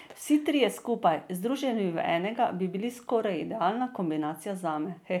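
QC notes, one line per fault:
No faults found on this speech clip.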